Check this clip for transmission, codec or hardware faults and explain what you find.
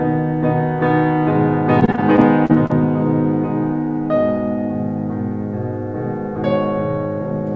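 One transmission fault is audible in this music, which runs through a G.722 call path with nothing above 8 kHz. From 1.80 to 2.74 s there is repeated packet loss, heard as a robotic sound: a rapid run of short gaps, the longest 38 ms, each filled by extending the preceding sound. About a fifth of that stretch is concealed, leaving it choppy with pieces missing.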